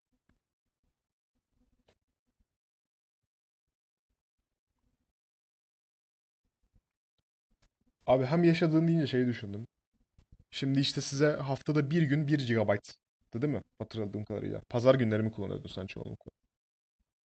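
No technical faults can be heard in this speech recording. It has come through a WebRTC call path whose codec leaves no content above 8 kHz, which fits Opus running at around 40 kbps.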